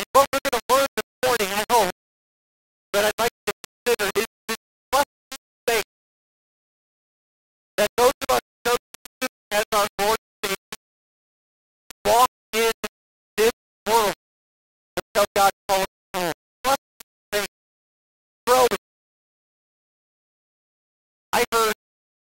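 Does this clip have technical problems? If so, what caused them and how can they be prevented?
Yes. Low bit depth without dither runs throughout: grainy distortion follows the sound, roughly 10 dB below it, likely from rounding to about 3 bits without dither. Prevent it by keeping 16 bits or more and applying dither before any bit-depth reduction.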